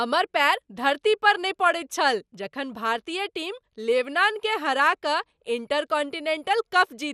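MP2 compression throughout: nothing above 15 kHz, with dull, gurgling, granular speech, likely Layer II starving upper sub-bands of bits at a rate near 80 kbps.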